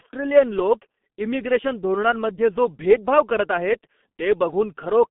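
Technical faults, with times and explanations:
Throughout, G.723.1 codec: the speech has passed through a narrowband telephony coder that models the voice in coarse 30 ms frames, and the heavy damage fits a rate of about 6.3 kbit/s. The line passes roughly 200 Hz to 3.5 kHz, with nothing above 3.6 kHz, so the speech sounds muffled and thin. Because the voice model updates so slowly, the speech turns hoarse and consonants smear into each other.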